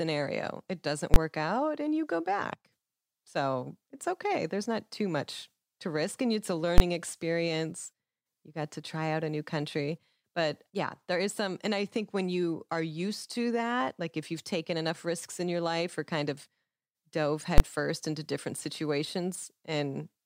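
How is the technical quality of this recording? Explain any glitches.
The speech is marred by three loud bangs where the signal briefly jumps to an extreme value far beyond the speech peaks.

Invalid numbers at full scale strike at 1.14 to 1.16 s, just before "out and you go"; at 6.78 to 6.80 s, right after "it's a"; and at 17.58 to 17.60 s, just before "into different". In each, a processing step produced infinite or undefined values that were clamped to the maximum sample level for a 20 ms block. Because each block is so short, the jump to the extreme value and back is heard as a single sharp bang rather than two separate pops with silence between them.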